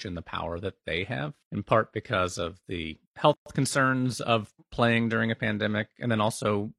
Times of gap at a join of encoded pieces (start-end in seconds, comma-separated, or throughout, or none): 3.33-3.46